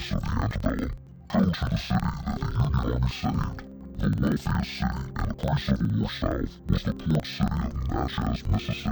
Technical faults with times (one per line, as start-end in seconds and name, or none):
0.00-8.92 interleaved audio read as planar